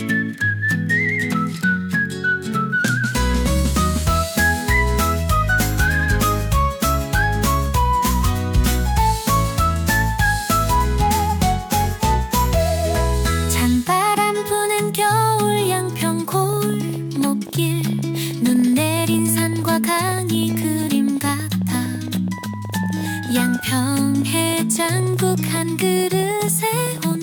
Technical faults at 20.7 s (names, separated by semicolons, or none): train of clicks